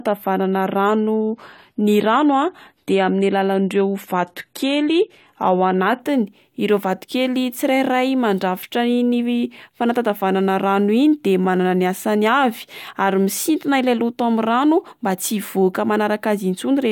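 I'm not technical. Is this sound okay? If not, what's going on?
No. From the start to 6.0 s there's an adaptive stream starting at a low bitrate. To begin playing quickly, the player first fetched a cheaper, heavily squeezed version of the speech, which sounds dull and more distorted, with the crisp top end missing. Once it had checked how fast your connection was, it switched to a better version at 6.0 s, so the clarity jumps up suddenly there without any pause or gap.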